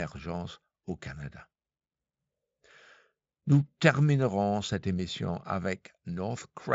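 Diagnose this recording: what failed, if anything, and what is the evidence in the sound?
Nothing here has failed: the speech comes through a Speex-coded path at a generous rate, with the top of the band stopping around 7.7 kHz as that codec's wideband mode would, and there's no sign of trouble at any stage from wiring to playback.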